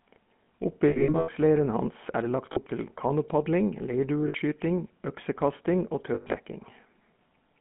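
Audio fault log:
throughout: GSM full-rate codec. A pulse-excited vocal-tract model gives the speech a plainly buzzy, gravelly roughness, and the band is confined to 150 Hz to 3.4 kHz, consistent with 13 kbps full-rate coding.
0.88–1.29 s, 2.52–2.59 s, 4.28–4.35 s, 6.14–6.36 s: lost GSM frames. Missing frames are bridged by repeating the last good settings, which leaves a rough metallic ring. The first and last spans are scattered losses with longest runs of around 100 ms.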